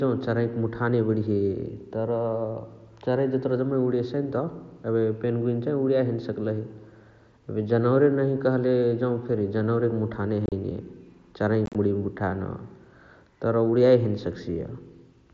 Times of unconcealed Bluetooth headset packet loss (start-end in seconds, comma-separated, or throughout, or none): 10.46-10.52, 11.66-11.75